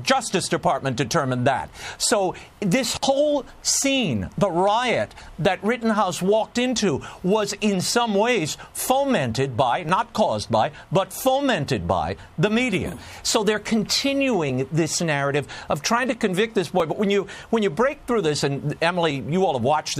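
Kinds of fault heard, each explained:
Clock drift buffer slips: a brief click recurs every 2.31 s from 0.67 s to 19.11 s, around ten times, each a jump where a few tens of samples go missing or repeat. The likely cause is two devices on separate clocks disagreeing by a few hundred parts per million, so the buffer between them drifts until it slips. A waveform shows abrupt discontinuities at that spacing, and a spectrogram shows thin, evenly placed vertical broadband lines.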